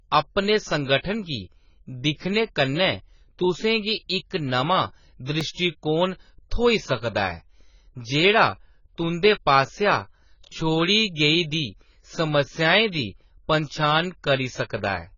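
The whole clip has a dull, smeared quality, and nothing comes through above 7 kHz. That's the signature of heavy AAC compression, likely AAC-LC squeezed down to a very low bitrate, somewhere around 16 kbps. At that rate the encoder drops the top of the spectrum and leaves gaps in what's left, so the sibilants turn fizzy and the vowels get a warbly, watery texture.

At 5.41 s there's a tiny click, a repeated buffer. The audio didn't arrive in time, so the device played the last chunk again, just once. That chunk is only about 2.7 ms long, which fits a 128-sample buffer. It's far too short to hear as a stutter, so the hard joins at each end collapse into one sharp tick, and a few milliseconds of real audio get pushed aside.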